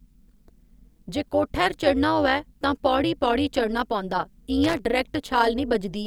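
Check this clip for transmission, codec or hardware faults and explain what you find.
Two faults are present. Throughout the speech, frames were windowed and rejoined with an overlap whose gains fail to sum evenly. This is overlap-add ripple: the level dips and recovers by about 11 dB each frame, at around 200 Hz, giving a metallic buzz over everything.

From 4.63 to 4.79 s, a worn or dirty contact briefly made and broke the circuit, chopping the signal. This loose connector crackle comes through as a short, irregular burst of scratchy crackle lasting roughly 0.16 s.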